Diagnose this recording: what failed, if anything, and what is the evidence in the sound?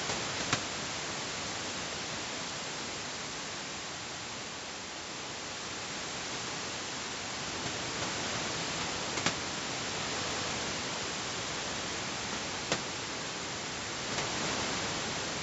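The failure is at the chunking stage of the processing or streaming chain: overlapping chunks. At 4.11 to 4.31 s and again at 10.31 to 10.51 s, a 200 ms stretch of speech plays twice, heard as a brief stutter at each join. The joins fall about 6 s apart, which fits audio cut into 6 s chunks, each beginning 200 ms before the previous one ended. On a waveform and spectrogram, the same 200 ms pattern appears twice in a row at each of those times.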